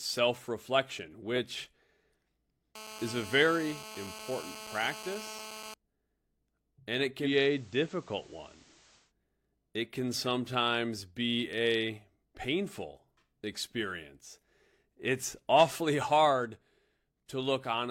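A nearby 2G phone on an active call rectified into the audio circuit of this speech recording from 2.75 to 5.74 s. Its transmit bursts at about 217 Hz (216.7 Hz) produce GSM phone buzz, a hard, raspy tone rich in harmonics that has nothing to do with the speech. It stays steady across the whole stretch, as it does during a call, and sits about 14 dB below the speech. Then, just after "and it", the receiver lost its digital signal and cross-faded over 185 ms to the station's FM analogue broadcast. This digital radio blending to analogue lasts from 7.19 to 9.13 s. During it a faint hiss rises to roughly 30 dB below the speech. The loudness stays the same through the change.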